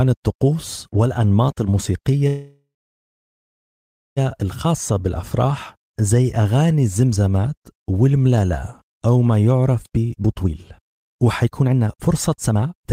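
Packets were likely held up in transit at 2.27 s, draining the jitter buffer and causing a call audio freeze until 4.19 s. The last sound stretches into a fading buzz, then about 1.5 s of silence. The speech then resumes where it stopped, delayed rather than cut.

From 9.90 s to the end at 12.92 s, the overfilled buffer triggers a jitter buffer speed-up. Pitch-period slices are repeatedly removed, roughly a second in total, so the speech runs at 129% speed with unchanged pitch and sounds hurried.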